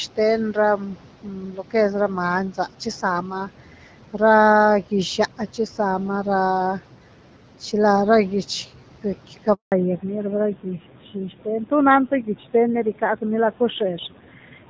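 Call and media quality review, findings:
Noise suppressor artifacts, whole clip: background pulled down about 12 dB, the residue sinking in pauses and swelling under speech. Per-frame band gains chasing steady noise. The room noise itself sits about 18 dB below speech.

Speech cut by the noise suppressor, 1.23–1.74 s: soft speech turned down by up to about 10 dB over roughly 0.4 s, sounding swallowed. The suppressor took quiet speech for noise. It fades but never goes fully silent, unlike a dropout.

Handover gap, 9.54–9.72 s: speech dies within a few tens of milliseconds, then a 180 ms clean silence. No speech frames arrived while the call switched networks. There is no concealment smearing as with packet loss, and the bandwidth changes right after.

Fallback to narrowband, 9.72 s to end: nothing above 4 kHz, and the speech turns duller and rougher. Codec renegotiated from HD Voice to narrowband AMR after the handover, which fits a drop from 12.65 to 7.4 kbit/s. 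Earlier audio reaches 7 kHz, so this is not microphone filtering.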